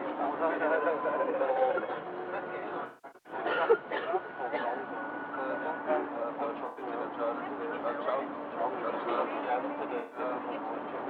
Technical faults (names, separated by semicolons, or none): AAC frame loss with concealment